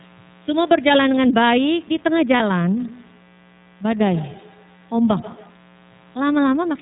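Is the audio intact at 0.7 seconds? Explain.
No. At 0.7 seconds the speech carries a mains buzz that runs through the whole clip. Sharp switching spikes enter twice per cycle of 60 Hz mains power. Their harmonics stack up into a steady, raspy buzz, sitting roughly 30 dB below the speech.

The same moment also shows plain iLBC codec damage, present from start to end. The codec rebuilds each 30 ms frame on its own and drops everything above 4 kHz, which fits its 13.33 kbps mode. The speech sounds clear but rough and somewhat synthetic.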